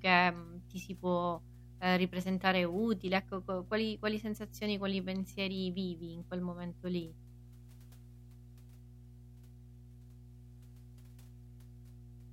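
Mains hum runs under the speech from start to finish: a steady 60 Hz tone with low harmonics, sitting roughly 20 dB below the signal. Power-line current is leaking into the audio path, typically through a ground loop or a nearby transformer.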